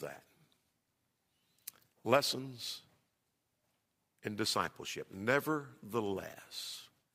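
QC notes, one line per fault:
Nothing stood out on listening to this speech clip.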